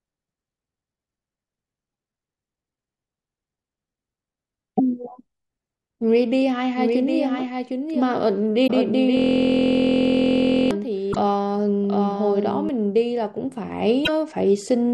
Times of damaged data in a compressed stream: 1.90-1.92, 4.74-4.80, 8.63-8.70, 11.09-11.16, 14.02-14.09

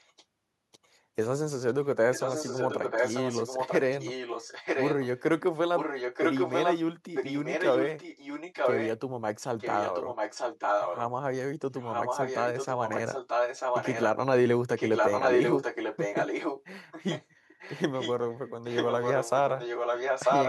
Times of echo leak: 0.00-0.25, 1.67-5.20, 5.75-6.78, 7.14-8.91, 9.58-11.01, 11.74-14.05, 14.70-20.49

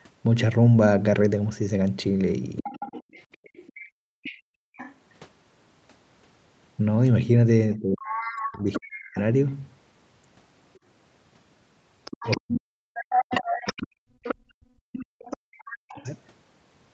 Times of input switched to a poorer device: none

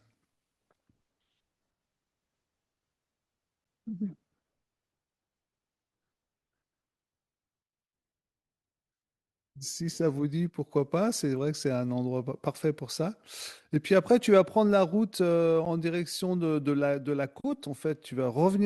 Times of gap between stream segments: 3.64, 15.65

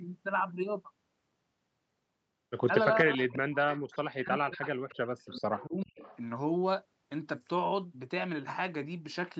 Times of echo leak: 3.70-3.96, 5.25-5.39, 5.81-6.19

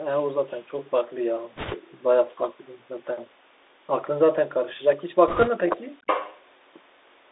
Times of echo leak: 0.53-0.61, 5.76-6.41

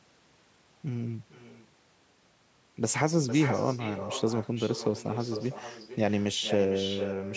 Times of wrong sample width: none

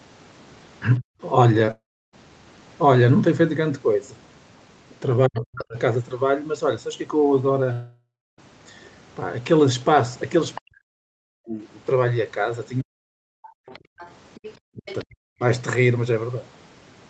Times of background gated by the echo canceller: 13.61-13.98

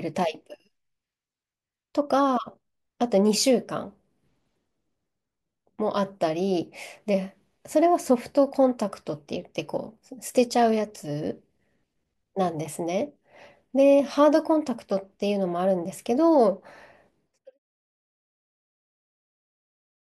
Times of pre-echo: none

